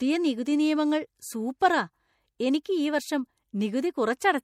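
A speech recording with plainly audible codec damage throughout: watery, swirly texture and nothing above 16.3 kHz, likely MP3 compression at a rate that fits 64 kbps. There's pre-echo from 2.63 to 2.65 s, a brief hiss smeared about 21 ms ahead of an attack that blurs its onset.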